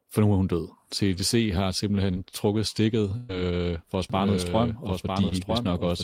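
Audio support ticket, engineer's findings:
Burst of packet loss, 2.11–2.18 s and 3.17–3.31 s (just before "for at"): last sound held then faded for about 45 ms and 120 ms. Audio resumes further on. Longer than a concealed blip: a decaying buzz/hiss, not a smear.

Doubled audio track, 4.1 s to end (from just after "for at"): full-band copy about 5 dB down, roughly 1 s late, abrupt onset, no decay or room colour, so not acoustic echo. Likely a second, slower capture path.

Short concealed packet loss, 5.29–5.33 s: about 20 ms gap filled by continuing the last sound, then blended back. Brief smear/wobble, no fade or audible skip, unlike the bursts.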